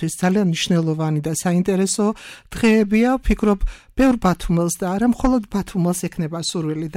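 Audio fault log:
There is no fault to log for this audio.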